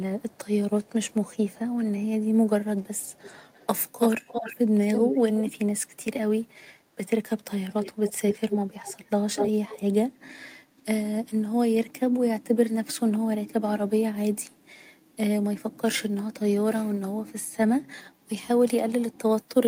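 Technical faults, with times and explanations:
0.00–0.49 s and 0.82–1.59 s, echo leak: a very faint copy of the speech trails it by 372 ms, likely because a far-end loudspeaker fed the microphone and the echo canceller let residue through. The copy arrives as a separate, later repeat rather than a smooth decay, which is what sets it apart from room reverberation.
4.94–5.52 s and 7.70–9.81 s, echo leak: the returned copy is now nearly as loud as the speech, at 333 ms and then 238 ms, so it sounds like a second overlapping talker instead of a reverberant tail.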